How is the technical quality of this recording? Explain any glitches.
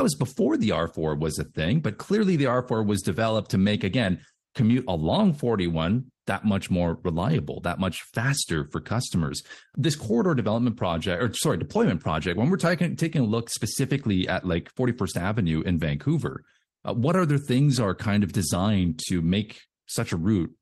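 No technical faults can be heard in this recording.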